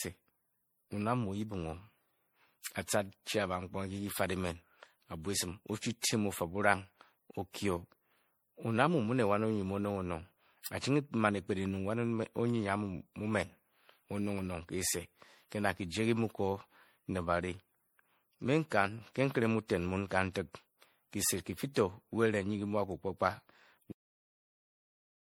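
Speech recorded through a lossy chain sounds swirly, hollow and smeared throughout, with blurred consonant attacks. This is most likely generation loss from MP3 at 64 kbit/s re-encoded around seven times, and a spectrogram shows patchy holes stacking up below 20.8 kHz. At 23.92 s the audio suffers a cut-off end, stopping mid-sound. The waveform drops straight to a flat line of digital silence without any decay.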